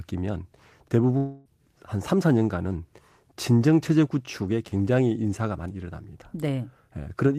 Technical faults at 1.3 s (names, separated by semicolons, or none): long network dropout